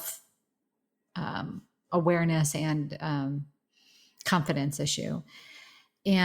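Nothing here trips up the ear: the speech runs along with no technical faults to point to at any moment.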